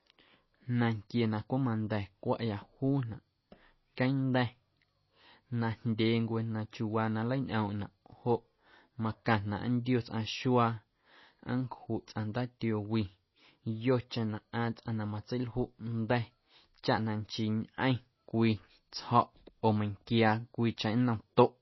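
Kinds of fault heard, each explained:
MP3 compression: The speech sounds dull and muffled throughout, with nothing above 5.8 kHz, so sibilants lose their crispness, and a plainly audible watery, swirling texture hangs over the sound. This is likely MP3 encoding at a very low bitrate, around 24 kbps by the sound of it. With so few bits, the encoder cuts all the treble at a fixed point and drops weak frequency components, which flicker on and off from frame to frame.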